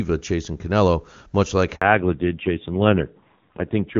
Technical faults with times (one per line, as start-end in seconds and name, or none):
1.75-1.81 handover gap
1.81-4.00 fallback to narrowband